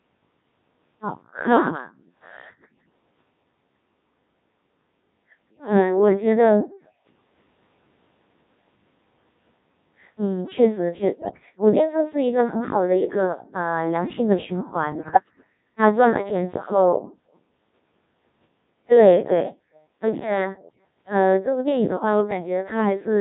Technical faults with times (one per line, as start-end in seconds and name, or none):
0.00-23.20 Codec 2 vocoder
11.13-11.46 bit errors on digital voice radio
14.92-15.44 bit errors on digital voice radio